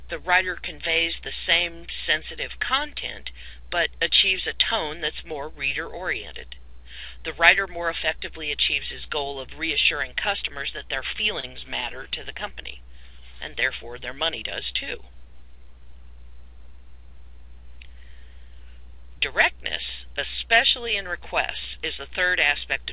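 From 11.4 to 11.45 s the sound briefly hangs, held for 30 ms, then carries on with nothing lost. This is a short stall from a late packet: the jitter buffer ran empty, so the receiver stretched the last sound until the packet arrived, leaving playback 30 ms later. Throughout, nothing is heard above 4 kHz, which fits the G.711 mu-law call path at 64 kbps.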